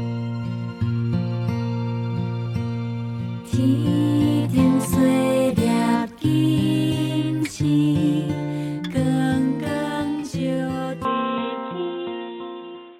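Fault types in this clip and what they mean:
Input switched to a poorer device: at 11.05 s the sound turns abruptly dull and boxy and stays so to the end, with nothing above 3.9 kHz, a level shift of about 5 dB and a new background noise roughly 40 dB down, with no gap at the switch. The likely cause is a change of input device. A filter or bandwidth drop alone would narrow the band without changing the noise floor and level together.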